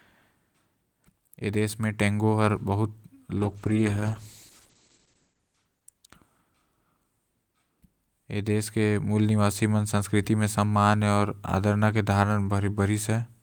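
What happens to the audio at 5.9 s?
At 5.9 s the speech sounds muffled and rough, with the top end gone. This is a call bitrate drop, running from 3.37 s to 6.47 s, with the worst stretch lasting about 1.8 s. The call's bandwidth estimate fell, so the encoder had far fewer bits. It coded more coarsely and narrowed the audio band from 20 kHz to 8 kHz. The dulled sound points to a fall from around 32 kbps to roughly 10 kbps.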